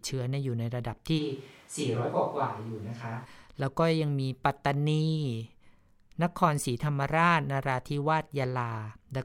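A switch to a distant microphone runs from 1.20 to 3.24 s. The speech suddenly turns roomy, hollow and bass-light, about 5 dB quieter, with room noise only about 30 dB below it. The close microphone's feed likely dropped out before the close sound snapped back.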